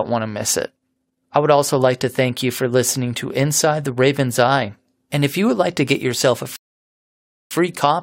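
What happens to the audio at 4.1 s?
Nothing goes wrong at 4.1 s: the speech carries on intact through that moment, with no dropout, click, distortion or other fault.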